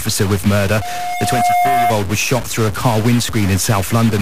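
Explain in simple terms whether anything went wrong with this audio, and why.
Two things went wrong. Throughout the recording there is a harsh, buzzy grit that doesn't go away even in the pauses, where it becomes a hiss. That points to a stuck bit, likely a broken data line or converter. Unlike ordinary overload distortion, it affects quiet moments too.

Right after "with murder", from 0.81 s to 1.95 s, a loudspeaker feedback squeal appears. A single tone near 711 Hz swells up over roughly 0.7 s until it is about as loud as the speech, then stops before "was shot through a". It grows by itself rather than starting at full strength like a steady hum or test tone would.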